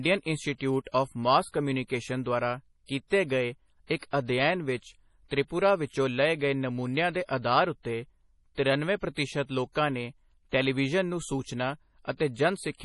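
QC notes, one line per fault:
throughout MP3 compression: likely a bit-starved encode fitting 32 kbps removes all sound above 11.5 kHz and flickers weak detail, leaving speech dull and watery.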